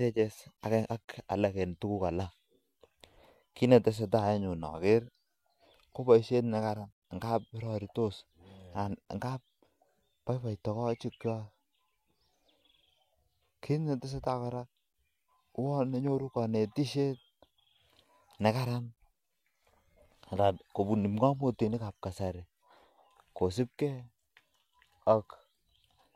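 No technical faults can be heard anywhere in the speech recording, and the signal stays steady and intact throughout.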